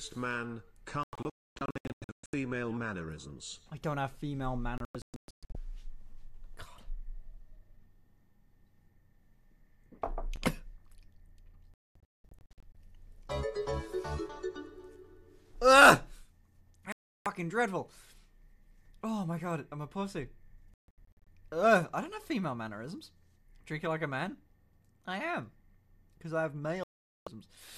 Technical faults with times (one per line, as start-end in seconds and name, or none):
1.03-2.34 digital broadcast dropout
4.78-5.55 digital broadcast dropout
11.74-12.75 digital broadcast dropout
16.92-17.26 digital broadcast dropout
20.74-21.27 digital broadcast dropout
26.83-27.27 digital broadcast dropout